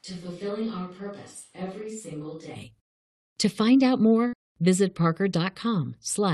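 From the very start the speech is already roomy and hollow, thin in the bass and about 10 dB quieter than what follows, with a faint room hiss sitting well below it. That's the sound of a switch to a distant microphone, most likely the close mic's feed dropping out so a farther pickup carried the audio. At 2.54 s it snaps back to the close, full sound, and the jump is abrupt rather than a fade.

Right after "find out", at 4.27 s, there's a burst of packet loss lasting until 4.36 s. For roughly 50 ms the receiver just stretches the last bit of sound it had, so you hear a brief held sound fading down instead of new audio. Then it picks up again further along, with about 60 ms of the speech gone. Throughout, the call runs over an Opus path, which tops out around 12 kHz.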